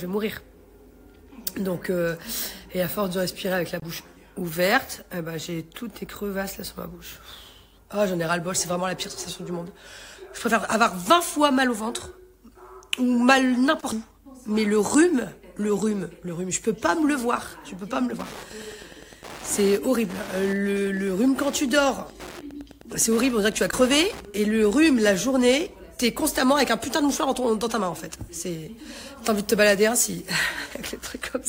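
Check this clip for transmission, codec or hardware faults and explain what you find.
One hardware fault is present, Wi-Fi interference from 18.02 to 25.27 s. A nearby Wi-Fi radio's beacon, repeating every 102.4 ms, is rectified by the audio circuit and heard as a steady tick about ten times a second, roughly 20 dB below the sound. Unlike GSM buzz, which chatters at 217 Hz, these ticks are slow enough to count individually.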